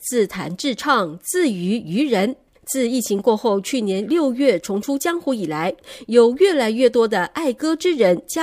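Nothing technically wrong can be heard anywhere in the speech recording, so there is no fault to place in time or trace to a cause.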